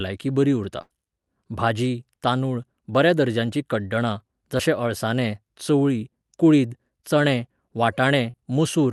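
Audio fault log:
0.81–0.92 s, burst of packet loss: about 80 ms of audio never arrived in time. The receiver extended the last sound and faded it across the gap, giving a held buzz or dying hiss, then playback jumps ahead with that stretch missing.
4.58–4.61 s and 8.31–8.35 s, short concealed packet loss: each time about 20 ms went missing, which fits one lost 20 ms Opus packet. The decoder patched the hole by continuing the preceding sound and blending back in, heard as a brief smear or wobble.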